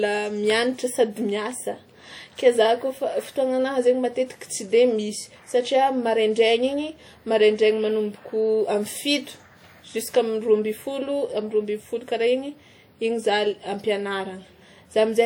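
WMA compression, throughout: the speech rings and sounds washy, with a hiss that breathes with it, likely from a transform codec at a low bitrate near 48 kbps.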